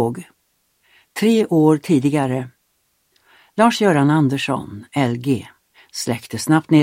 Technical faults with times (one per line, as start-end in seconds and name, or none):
none